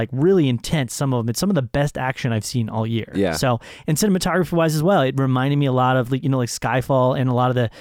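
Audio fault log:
No technical faults are audible; the speech signal holds steady, with no audible level, timing or channel problems at any point.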